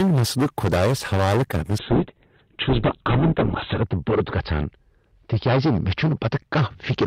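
Hard clipping runs throughout: the speech is overdriven by about 18 dB, so roughly a sixth of the waveform is cut flat, giving harsh fuzz on every loud syllable. A call bitrate drop begins at 1.79 s and lasts to the end. The encoder is forced onto far fewer bits, plausibly from 32 down to 8 kbps, and the top end narrows from 20 kHz to 4 kHz, so the speech turns muffled and watery, at its worst for about 2 seconds.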